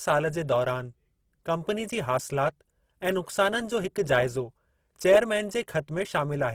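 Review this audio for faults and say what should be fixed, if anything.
Opus compression damage is plainly audible throughout. The speech turns grainy and rough, though bandwidth still reaches about 20.4 kHz. This fits Opus in its music mode at a starved bitrate, likely near 16 kbps. Encode at a higher bitrate to prevent it.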